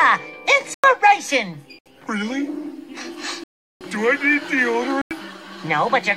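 Four blocks of digital silence, at 0.74, 1.79, 3.44 (about 0.37 s) and 5.02 s, where the output likely wasn't filled in time, show as flat zero-line gaps.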